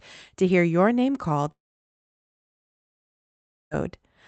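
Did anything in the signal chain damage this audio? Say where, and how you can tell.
Yes: a long network dropout, 1.51 to 3.74 s, after "hear your name called"; a brief fading buzz, then silence, likely from lost packets.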